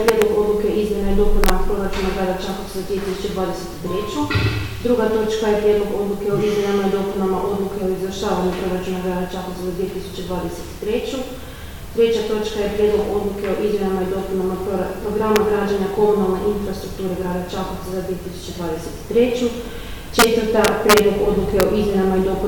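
Integer overflow strikes six times: 0.08 to 0.22 s, 1.44 to 1.50 s, at 15.36 s, 20.19 to 20.24 s, 20.65 to 20.99 s, and 21.60 to 21.63 s. Peaks pushed only about 1 to 4 dB past full scale wrap around to the opposite extreme instead of being held at the ceiling. The result is violent, full-range cracks. Clipping would leave a flattened, buzzy edge, but here the waveform leaps across the whole range and snaps far more harshly.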